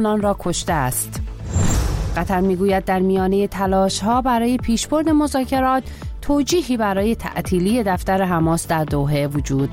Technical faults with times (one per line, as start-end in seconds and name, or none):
1.74 damaged data in a compressed stream